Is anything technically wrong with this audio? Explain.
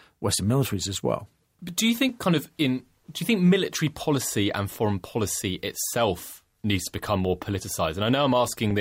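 Yes. Starting at 2.09 s, just after "do you", and running to 8.71 s, there are clock drift buffer slips. The likely cause is two devices on separate clocks disagreeing by roughly 300 ppm, so the buffer between them periodically drops or repeats a few dozen samples. Each slip makes a click about every 2.2 s, four in all.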